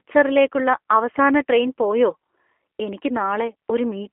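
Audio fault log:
Throughout: G.729 codec. Speech sounds rough and synthetic, band-limited to about 300 Hz to 3.4 kHz, which fits an 8 kbit/s pulse-coded vocal tract model.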